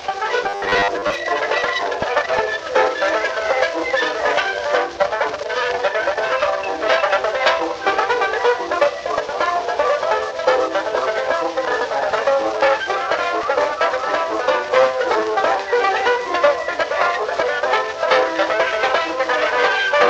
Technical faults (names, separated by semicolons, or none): robotic sound from repeated short buffers